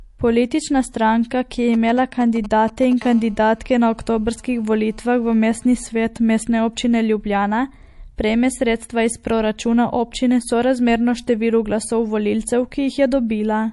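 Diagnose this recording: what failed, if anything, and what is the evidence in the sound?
Throughout the speech the treble stops dead at about 11.3 kHz, and the audio has a plainly audible watery, swirling quality with smeared attacks. That points to the codec stage, likely MP3 compression at a low bitrate around 48 kbps, starving and switching off weak frequency lines.

From 1.74 to 2.93 s there is a galloping dit-dit-dit of short buzzes, roughly 15 dB below the speech. These are GSM signalling bursts. A nearby 2G phone's intermittent transmissions at a 217 Hz burst rate are being rectified in the analogue wiring.

From 3.02 to 5.90 s a steady, raspy GSM phone buzz at 217 Hz, rich in harmonics, sits about 30 dB below the speech and is unrelated to it. This is a nearby 2G phone in a call, transmitting in bursts 217 times a second, again rectified by the analogue circuitry.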